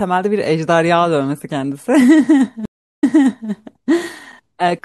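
A short speech recording that sounds watery and swirly throughout, with a dulled top end, metallic chirps on the s sounds, and consonant attacks that smear rather than snap. This is likely MP3 compression working with too few bits: the encoder has cut the treble above a fixed frequency and dropped weaker frequency lines, which flicker on and off from frame to frame. The damage is plainly audible and fits a bitrate around 64 kbps. At 2.65 s the audio drops out into roughly 0.37 s of silence, then comes back and replays material from about 0.48 s earlier, so a stretch of the speech is heard twice before the disturbance settles by 3.51 s. That is a stream reconnect: the connection broke, the player went quiet, reconnected, and a fresh decoder picked up a resent burst of audio from an earlier point in the stream.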